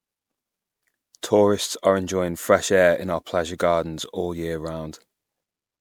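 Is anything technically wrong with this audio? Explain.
Yes. The speech carries generation loss from start to finish. It sounds swirly and hollow, with a smeared, watery texture. Consonant attacks are blurred rather than crisp. The damage is heavier than one pass at a moderate bitrate would leave. The likely cause is repeated MP3 coding, about four rounds, each at a rate near 128 kbit/s. Every pass quantises on a shifted frame grid. Noise and spectral gaps then pile up.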